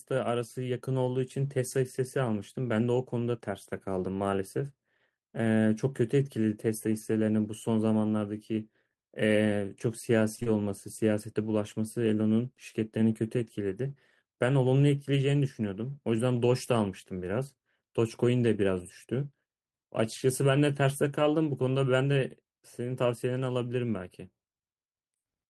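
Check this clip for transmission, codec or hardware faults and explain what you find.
Short concealed packet loss occurs in a quick run at 10.35, 10.40 and 10.43 s, ending by 10.48 s. Each time about 20 ms of speech arrived too late, and the decoder extrapolated from the preceding sound, leaving a brief smeared wobble.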